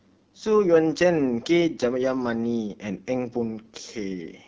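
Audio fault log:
throughout AMR wideband (HD Voice) codec: rough, raspy speech, pointing to one of its lowest rates near 8.85 kbit/s; the spectrogram shows smeared harmonics, a noisy 6.4 to 7 kHz band, and nothing above.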